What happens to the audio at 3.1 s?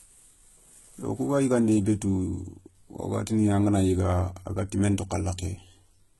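At 3.1 s, as throughout the speech, the treble above about 11.8 kHz is gone and the upper band sounds synthetic, with gritty, lispy s sounds. This is likely HE-AAC compression at a very low bitrate, rebuilding the highs by copying lower bands upward under a coarse envelope.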